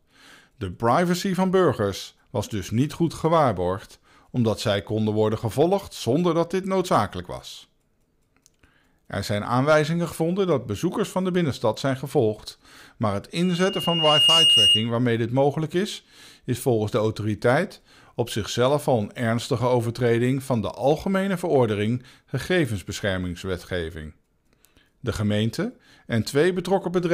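A microphone picked up its own loudspeaker, and at 2.8 kHz the loop gain passed one, producing loudspeaker feedback squeal from 13.43 to 14.92 s. After "zijn gevolgd maar het", a pure tone swells over about a second to several dB above the speech, then stops before "dit mogelijk is is".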